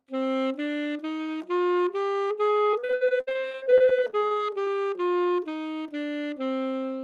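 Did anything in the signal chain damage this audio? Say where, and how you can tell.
Yes, at the network stage: repeated packet loss (robotic sound) from 2.71 to 4.68 s. Dozens of short dropouts, the longest near 62 ms, were patched by extending the previous sound, so about a third of that stretch is concealed, giving choppy, fragmented audio.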